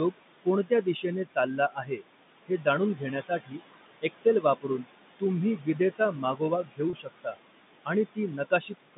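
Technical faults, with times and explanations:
Throughout: noise suppressor artifacts. Background noise is pulled down by about 20 dB between phrases and rises under speech.
0.12–2.03, 2.47–3.63, 4.01–4.86, 5.57–7.37, 7.85–8.97 s: speech cut by the noise suppressor. Quiet syllables mistaken for noise drop by about 20 dB, sounding swallowed, roughly 2.2 s in all.
6.90 s: packet loss with pitch repetition. A 30 ms gap, which fits one lost packet, is bridged by repeating the last pitch period, heard as a brief buzzy hold.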